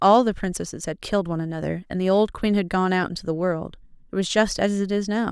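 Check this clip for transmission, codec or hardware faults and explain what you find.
No faults found in this clip.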